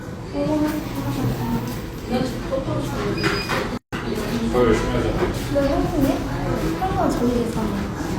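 This recording of sounds drops briefly into silence from 3.77 to 3.93 s. The continuous sound stops abruptly and leaves a hole of about 150 ms. The edges are softened rather than perfectly clean, and the sound then resumes exactly where it left off. This is a gap at a join of encoded pieces. The audio was encoded as separate segments of about 4 s and joined without trimming. The encoder's start-up silence and the padding on the previous segment's last frame both remain in the joined audio.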